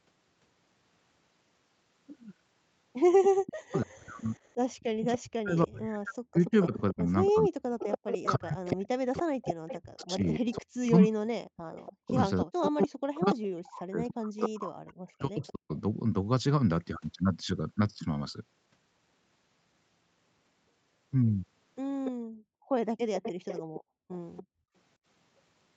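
A recording of speech in which, from 3.45 to 15.72 s, the talker's voice repeatedly sinks, thins or breaks off in pieces, losing about seven seconds in total and dipping by roughly 40 dB at its deepest. The likely cause is speech suppressed in double talk: with both ends speaking at once, the echo canceller could not tell this talker apart from the loudspeaker echo and pulled everything down together. Over the same stretch and again later, a second copy of the voice trails the original by 285 ms, at 3.46 to 3.86 s, 5.16 to 6.5 s, 7.79 to 13.35 s and 22.05 to 24.43 s. It sits about 20 dB under the main voice in the first two passages, rises to about 10 dB under it from 7.79 s, and is about 15 dB under it in the last. This is likely an echo leak: a far end playing the call through a loudspeaker did not cancel everything its microphone caught and sent the remainder back. Near the end the room tone itself vanishes for a moment, from 22.16 to 22.71 s with a drop of about 38 dB, and from 23.8 to 24.74 s with a drop of about 36 dB. 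Both dips fall while the echo is sounding, so this is background gated by the echo canceller, which clamped the microphone hard while the loudspeaker was active and then let it recover. The call's microphone processing leaves nothing above 8 kHz.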